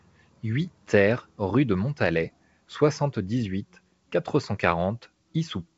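Nothing in this speech clip stood out on listening, with the G.722 wideband telephone coding at 64 kbit/s carrying it as expected.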